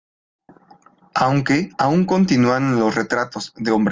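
No technical fault can be heard anywhere in this speech recording, and the signal holds steady throughout, without interruption or damage.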